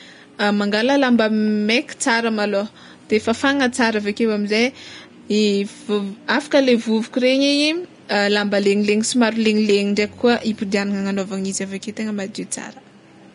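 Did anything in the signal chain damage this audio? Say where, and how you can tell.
Yes, at the codec stage: the speech is plainly grainy and hissy throughout, with blurred attacks, which points to a low bitrate near 34 kbps, likely from Vorbis compression. Unlike the room noise about 36 dB below the speech, this grain comes and goes with the speech.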